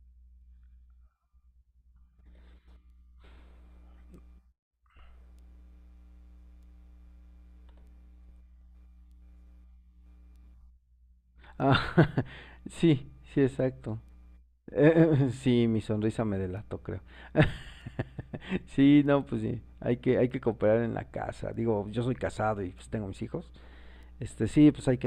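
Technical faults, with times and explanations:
No technical faults can be heard in this speech recording.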